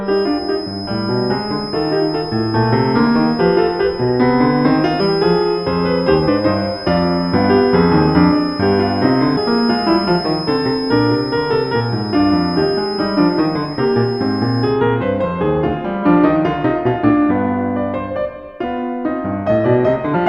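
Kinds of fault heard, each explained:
Feedback whistle: a steady 5.1 kHz tone sitting well below the music until 14.8 s, likely from a speaker-to-microphone loop; on a spectrogram, a thin horizontal line.
Damaged data in a compressed stream: corrupted frames make the decoder lose sync, giving five brief blips between 4.99 s and 20.16 s, each a short broadband smear or waveform break.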